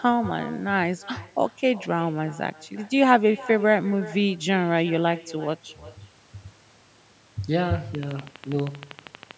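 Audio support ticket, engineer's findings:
Echo with no canceller, whole clip: quieter, thinner copy of the speech trailing each phrase by roughly 0.4 s, about 20 dB down. Far-end loudspeaker audio re-captured by the microphone, returned over the network.

Train of clicks, 7.95 to 9.32 s: regular ticking at 12.5 per second, around twenty clicks, peaks a few dB above the speech. Likely interference from nearby equipment or a faulty connection or power supply.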